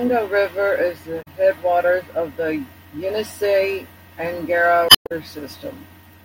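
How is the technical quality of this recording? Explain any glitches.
The speech recording has two glitches, both from damaged data in a compressed stream. Decoding errors break in at 1.19–1.28 s, between "is the" and "headwaters of the", and at 4.86–5.12 s. Corrupted bytes there made the decoder misread frames and lose sync until it found a valid frame header again.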